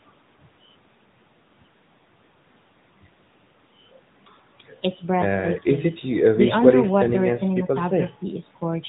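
AMR narrowband mobile codec damage runs through the whole of this speech clip, from start to finish. The codec samples at 8 kHz, so nothing above 4 kHz survives, and the voice is rebuilt from a vocal-tract model excited by a few pulses per 5 ms subframe. The damage is plainly audible, with a buzzy, synthetic edge that fits a mid-range AMR-NB mode of around 10.2 kbps.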